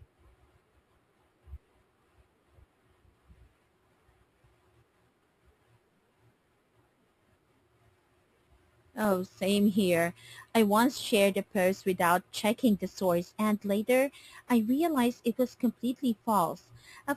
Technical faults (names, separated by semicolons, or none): imaging from sample-and-hold upsampling